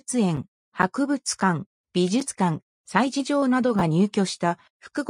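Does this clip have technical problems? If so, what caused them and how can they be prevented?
Yes. Chunks out of order at 3.79–3.81 s: a 10 ms chunk plays one chunk late, causing a brief jumbled moment. The waveform shows three abrupt discontinuities, and the spectrogram shows thin vertical broadband lines. Reorder chunks by sequence number or timestamp in a jitter buffer before playback.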